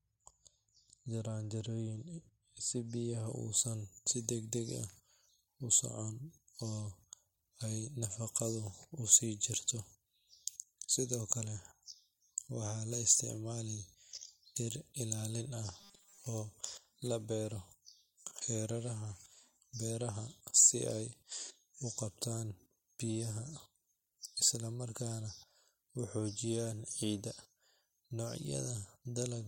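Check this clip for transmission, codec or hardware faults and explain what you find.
Two faults are audible in this speech clip.

From 3.26 s to the end, pre-emphasis is left on. The treble boost matches the 75 µs FM curve, but the matching de-emphasis was never applied. Highs sit about 13 dB above 1 kHz at 10 kHz. The speech turns thin, bright and hissy on sibilants.

From 15.80 s to 16.18 s, there is a robotic sound from repeated short buffers. The speech becomes a rigid metallic buzz at 200 Hz. The likely cause is audio arriving too late, with the last 5 ms repeated to fill the gaps. Most of the passage is replayed fragments, not new audio.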